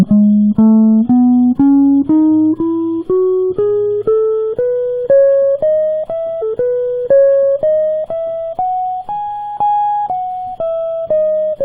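At 6.41 s the music jumps back and replays about 2.0 s of material, running to 8.41 s. This is a repeated stream segment: the player queued the same chunk twice. Unlike a stutter or loop glitch, a full two-second passage recurs intact, marked by one small blip at the jump.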